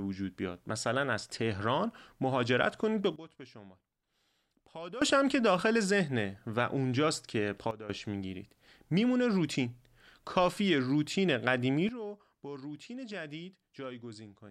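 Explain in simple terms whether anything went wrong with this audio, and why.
Something did go wrong: the speech has a sudden gain jump, three times. The level drops sharply and instantly at 3.16 s until 5.02 s, again briefly from 7.71 to 7.90 s, and once more from 11.89 s to the end. The background falls along with the voice, so the whole signal got turned down at once, likely a gain setting applied in one step with no gradual fade.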